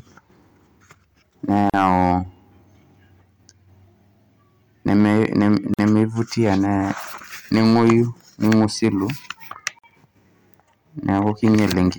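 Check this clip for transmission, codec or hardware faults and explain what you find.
Two faults are present: repeated hard clipping and short silences where separately encoded pieces were joined.

Hard clipping: some stage received more level than it could pass and cut the peaks flat, adding high harmonics heard as harsh crackle. It occurs at 1.51–2.14 s (about 6 dB over), 4.88–6.03 s (about 4 dB), 6.44–6.54 s (about 2 dB), 7.54–7.98 s (about 5 dB), 8.45–8.88 s (about 4 dB), at 9.67 s (about 3 dB), and at 11.09–11.87 s (about 8 dB), where the fuzz is heaviest.

Gap at a join of encoded pieces: the speech was encoded in chunks that were spliced without trimming the encoder's start delay and end padding. This opens short dropouts with smeared edges of 40.8 ms at 1.70 s and 49 ms at 5.74 s and 9.79 s, recurring every 4 s. After each dropout the sound resumes where it stopped.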